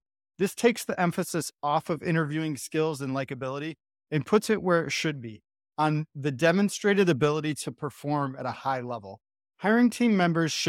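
No technical faults can be heard anywhere in this speech recording. The audio holds steady throughout, with no event worth marking at any point in time.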